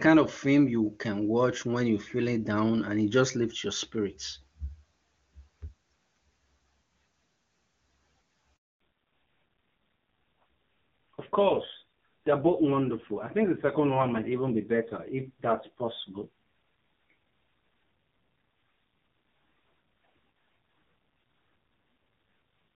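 Speech, carried first as a clear HD Voice call. The AMR wideband codec sounds clean here, at a quality that fits its highest rate of about 24 kbit/s. At 8.56 s a handover gap opens. The voice dies away within a few tens of milliseconds and stays silent until 8.80 s, a 240 ms hole. The call was switching networks, and no speech frames arrived during the switch. Whatever was said in that span is gone. From 8.80 s to the end comes a fallback to narrowband. Nothing remains above 4 kHz, so sibilants lose their edge and the voice turns dull. It is also rough and raspy. That points to AMR-NB at a low rate, near 5.9 kbit/s. The call dropped to the older codec and never recovered.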